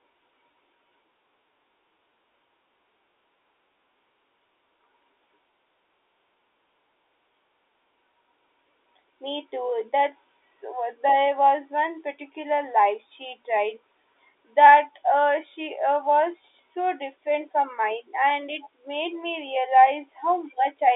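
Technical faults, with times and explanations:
Nothing stood out on listening to this speech, which comes over an ordinary telephone line with nothing heard above about 3.8 kHz.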